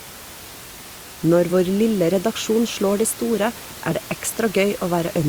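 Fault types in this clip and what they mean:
Compressed frames skipped: one 21.3 ms frame was lost or rejected as damaged, so at 1.49 s the speech jumps ahead.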